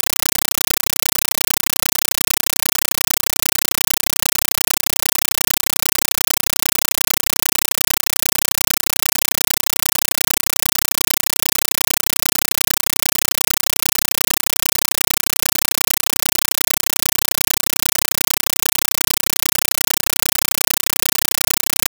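From start to end, a compressed stream played as audio: undecoded Dolby Digital data becomes loud, chattering static, with full-band 8 ms noise bursts repeating 31.25 times a second on the waveform.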